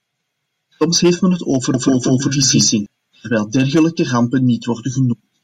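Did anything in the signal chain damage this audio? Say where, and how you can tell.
Yes. A doubled audio track runs from 1.74 to 2.86 s. An equally loud, dry copy trails by about 200 ms, likely from a duplicated capture path or edit.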